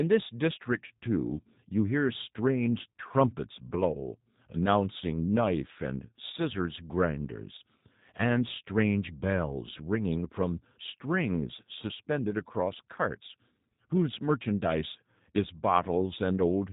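From start to finish, the speech carries G.729 codec damage, and it is plainly audible. The codec does not send the waveform itself. It rebuilds each frame from a vocal tract filter, a pitch predictor and a few pulses. That model gives the voice a rough, slightly synthetic edge. Nothing above 4 kHz survives, so sibilants sound dull and clipped. The coarse texture fits a low rate of about 8 kbit/s.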